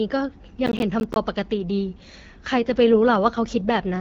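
From 0.66 to 1.16 s there is processor overload crackle. The processor falls behind and misses a run of buffer deadlines, around ten of them. Each miss drops in a short hole of silence with hard edges. The holes are roughly 10 ms long, which points to buffers of about that size. Heard together, they make a gritty, tearing crackle over the speech. It stops once the load clears.

At 2.51 s an AMR rate drop begins and lasts to the end at 4.0 s. The speech is carried by the AMR wideband (HD Voice) codec. Before the drop it sounds like a clear wideband rate, which fits 12.65 kbit/s, with only light coding texture. Here the network seems to push the codec down to a lower rate, consistent with 8.85 kbit/s. The bandwidth stays the same and nothing drops out. The speech turns rougher and more synthetic.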